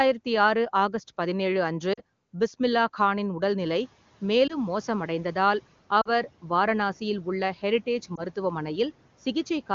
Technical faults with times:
1.93-2.00 lost AMR speech frames
4.47-4.57 lost AMR speech frames
6.01-6.10 lost AMR speech frames
8.16-8.22 lost AMR speech frames

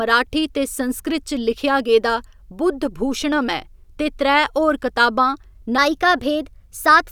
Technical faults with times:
5.78-7.11 section at the wrong speed

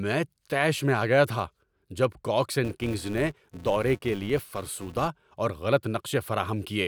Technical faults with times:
2.64-5.08 filter restarted on every block

